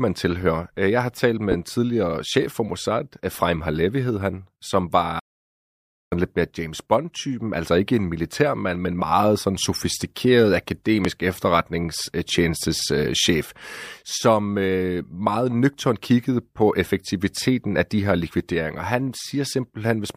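Loud pops at 1.52–1.55 s and 11.05–11.08 s jump roughly 15 and 20 dB above the speech, each a single sharp thump, likely from a plug, switch or static transient. An audio dropout to silence from 5.20 to 6.12 s cuts the speech for 0.92 s into silence with no room tone, likely a lost input that the recorder filled with silence.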